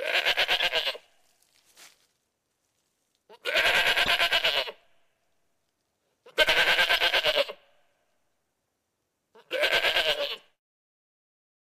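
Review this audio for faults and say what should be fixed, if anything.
A short stretch of misplaced energy, peaking about -15 dBFS at 4.05 to 4.08 s, is a corrupt frame decoded: about two damaged frames played with misread gains and codes.

A small jump forward at 6.49 s, skipping roughly 20 ms, is likely a dropped buffer (overrun), with samples overwritten before collection.

To prevent these, add error checking that conceals bad frames instead of decoding them, and enlarge or prioritise the capture buffer so it is read in time.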